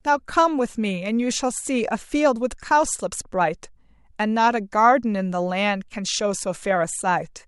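Nothing technically wrong turns up anywhere in this short bit of speech, so there's no fault to time or trace back to a cause.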